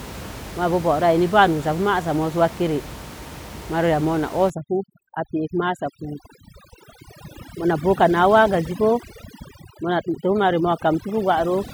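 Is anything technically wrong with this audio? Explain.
Yes. From 4.5 s, just after "yamo na", to the end, there is overdone noise removal: an aggressive noise reducer silences any frequency band near its noise estimate, including quiet speech detail. The room noise, about 14 dB below speech before this, collapses into near silence with twinkling specks. Unlike codec artefacts, the background drops away abruptly rather than the whole signal degrading.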